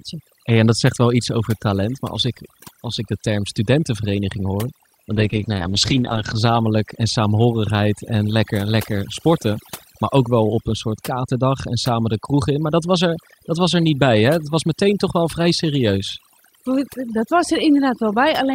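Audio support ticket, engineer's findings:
Overdone noise removal, whole clip. Background pulled down, breaking into twinkling specks. Quiet parts of speech swallowed. Probable component: noise suppressor set too strong. Bands near its noise estimate get cut hard or gated out, including soft speech energy.

Call bitrate drop, 5.13 to 6.43 s. Speech turns rough and muffled, highs gone. Probable component: Opus encoder after a fall in the bandwidth estimate. Rate fell from 32 to 10 kbps, bottoming out for about 1.24 s. Coarser coding plus high-band cutoff until recovery.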